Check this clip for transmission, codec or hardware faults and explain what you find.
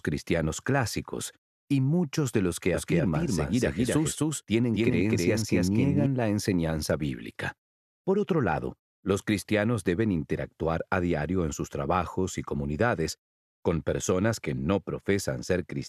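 There's one fault here, a doubled audio track, running from about 2.74 s to 6.06 s. Through that stretch a second, full-band copy of the sound sits about 0.3 s behind the original, at about the same level, so everything seems to stutter into itself. The copy has no decay or room colour, and it cuts in and drops out abruptly. The likely cause is a second, slower capture path or an edit leaving two copies out of step.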